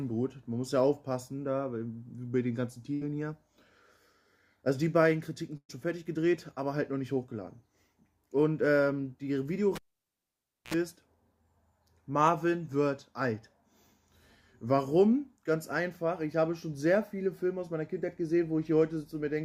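Burst of packet loss at 2.93 to 3.03 s and again at 5.57 to 5.71 s: in both places a run of audio never arrived in time, about 80 ms in the first and 120 ms in the second. The receiver filled each hole by stretching out the last sound it had and fading it, so the audio smears into a held tone or hiss and then jumps ahead. In the second gap the fade runs all the way down, leaving about 70 ms of silence before playback resumes. Cable pulled and plugged in at 9.75 to 10.74 s: a pop marks the connector coming out, then the sound drops to near silence for a little over 0.9 s. As the plug goes back in and only the tip makes contact, a short burst of 60 Hz mains buzz, about 60 ms, breaks through, and a second pop follows as the full signal returns.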